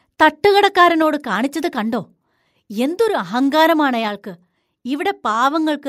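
Microphone overload from 0.22 to 0.59 s: the loudest syllables carry a harsh, crackling edge, likely because input gain drove peaks about 1 dB past the converter's limit, flattening a small fraction of samples. Microphone volume stepped down at 1.02 s and 4.08 s: the whole level drops abruptly, by about 3 dB and then about 2 dB, likely the call software cutting input gain.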